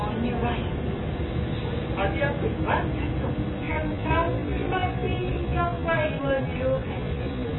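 Low-bitrate AAC compression is the likely cause of damage heard across the whole clip. An AAC-LC encoder working with very few bits, which fits a rate around 16 kbps, leaves holes in the spectrum and lowers the band's cut-off. The audio comes out heavily dulled and muffled, with smeared transients and a watery, fizzy warble on sustained content, since the coarse quantisation leaves gaps the ear hears as swirling noise.

From 3.59 s to the end, a time-stretched section slows the audio to 0.64 times its original speed. Stretching software likely lengthened this stretch while holding the pitch steady, filling the extra time by repeating short overlapping slices of the signal. The pace drops abruptly at 3.59 s while the pitch stays put, and the slowed material drags.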